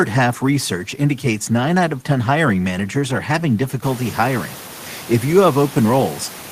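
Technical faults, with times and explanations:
The speech signal shows no technical faults, and the background noise of the room rises by about 14 dB around four seconds in while staying about 20 dB below the speech, which belongs to the space itself rather than to the recording chain.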